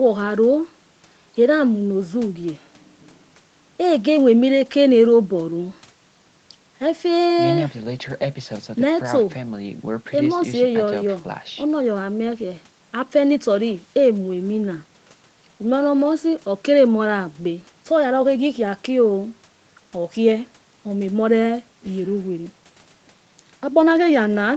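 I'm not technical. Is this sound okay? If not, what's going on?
Yes, the speech comes through as an ordinary call would, with the top end stopping at about 8 kHz as the call path normally does, and nothing is wrong.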